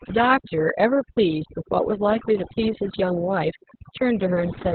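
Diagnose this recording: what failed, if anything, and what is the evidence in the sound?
Two things went wrong here, both running the whole way through. The first is overdone noise removal at the call-processing stage. The background has been pushed down, but it twinkles with little isolated specks where single frequency bands pop in and out. The suppressor has been gating bands that sit close to its noise estimate, and the quieter parts of the speech got caught too.

The second is Opus voice compression at the codec stage, heavily damaged. Nothing survives above about 4.3 kHz, so it's running narrowband in its SILK speech mode, and the voice comes out muffled, hoarse and a bit robotic. That combination of a hard band limit and coarse excitation coding points to a very low bitrate, somewhere around 6 kbps. At that rate the encoder drops everything above the telephone band and approximates the vocal excitation crudely.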